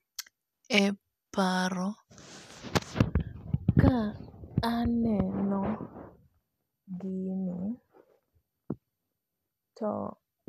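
Speech recording with no audible technical faults.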